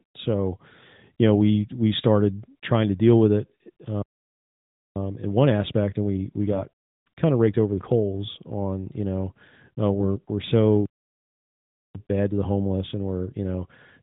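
At 4.96 s, just after "to deal with it", the speech turns hurried until 7.96 s, ending before "on you know uh". This is time-compressed catch-up. The player trims and cross-fades small slices to run at about 1.15 times speed. Pitch stays normal.

At 10.86 s the sound stops dead for 1.09 s. This is a playback stall. The player likely ran out of data or was blocked. Speech resumes at 11.95 s through the narrowband phone-band sound.

From 11.95 s to the end at 14.02 s, catch-up returns more strongly. The backlog from the stall is cleared at 1.25 times speed. The speech sounds rushed, at normal pitch.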